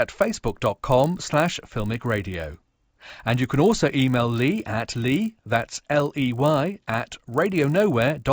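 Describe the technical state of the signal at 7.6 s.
At 7.6 s, as throughout, the resampler restarted on every block. Each 20 ms block was converted from 16 kHz to 48 kHz alone. Edge errors make a 50 Hz buzz under the speech.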